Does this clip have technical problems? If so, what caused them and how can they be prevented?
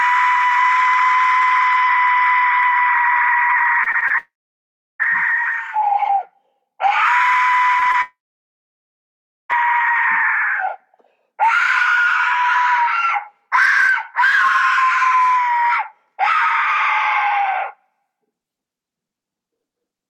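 Yes. From 3.83 to 4.12 s the sound turns choppy and robotic, the sign of repeated packet loss (robotic sound): five gaps of up to 25 ms each were patched by extending the previous sound, covering about 29% of that stretch. A jitter buffer with more headroom and forward error correction would prevent this.

From 4.18 to 5.01 s and again from 8.02 to 9.51 s, a buzz or hiss fades into silence lasting about 0.7 s and about 1.35 s, after which the sound resumes with that material gone. The likely cause is a long network dropout, during which the receiver could only extend the last sound before giving up. A more stable connection, such as wired rather than congested Wi-Fi, would prevent this.

Between 7.80 and 7.83 s and between 7.92 and 7.96 s there are brief smears, each a short concealed packet loss in which about 20 ms of missing audio was filled with a continuation of the preceding sound. 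Slightly deeper buffering with redundant packets would prevent these.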